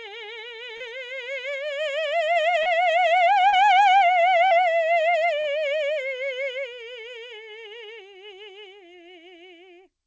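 Short concealed packet loss at 0.77, 2.63, 3.49, 4.48 and 5.41 s: about 30 ms of music arrived too late each time, and the receiver extended the preceding sound to bridge it, leaving a brief smear or wobble in this call-path audio, which has nothing above 8 kHz.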